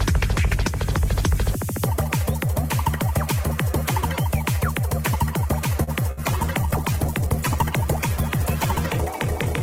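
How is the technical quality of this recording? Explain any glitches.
The recording has three network glitches clustered late on, from about 5.8 s to the end.

At 5.83 to 5.90 s there's a short stall from a late packet: the jitter buffer ran dry, so the sound gets held about 39 ms, then picks up where it left off.

Right after, at 6.11 to 6.20 s, comes a burst of packet loss. The receiver stretched and faded the last sound, and roughly 60 ms of audio is simply gone.

From 6.19 s onward there's a call bitrate drop, 48 to 12 kbps. The encoder starves for bits, so everything turns rougher and duller to the end.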